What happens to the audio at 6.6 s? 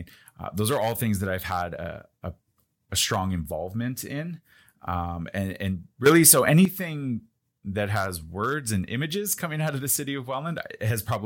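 The speech and its background noise leap about 10 dB louder together from 6.06 to 6.65 s, a sudden gain jump, likely a gain change applied between adjacent samples with no ramp.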